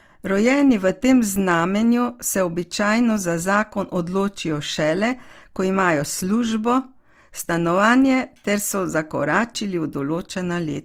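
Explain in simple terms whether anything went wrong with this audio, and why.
Something did go wrong: from start to finish, the speech sounds rough and grainy, as if a fine hiss were woven into it. The likely cause is Opus compression, which squeezes the file by replacing detail it cannot afford with filler noise. That sets it apart from MP3 damage, which leaves gaps that make sound swirl or warble. Here the full range of treble is kept. The texture is simply gritty.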